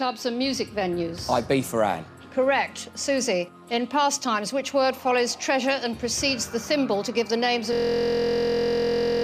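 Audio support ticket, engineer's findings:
System hang loop, 7.73 s to end of clip. Audio collapses into a steady buzz at about 43.1 Hz: one 23.22 ms slice repeated roughly 65 times without change. Probable component: driver or host stalled while the audio hardware kept replaying its ring buffer. Loop length fits a 1024-sample buffer. No recovery before the clip ends.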